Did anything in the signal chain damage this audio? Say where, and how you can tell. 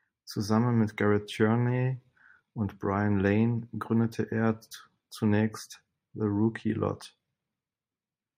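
No, there's nothing here to point at: this one comes through without any sign of the chain getting in the way of the speech.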